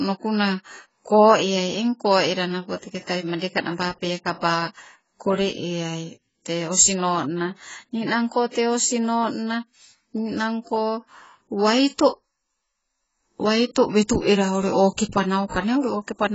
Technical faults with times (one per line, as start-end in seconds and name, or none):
0.00-16.35 AAC compression